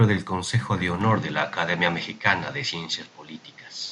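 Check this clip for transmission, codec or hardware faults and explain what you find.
There's one fault here: from about 1.01 s to the end, the sound changes character abruptly, most likely because the input switched to a poorer device. With no gap at the switch, the speech goes duller and boxier, losing everything above 7.6 kHz, the level shifts by a few dB, and a new noise floor appears, roughly 30 dB under the speech. That's the narrower band, different tone and own background noise of a poorer input device.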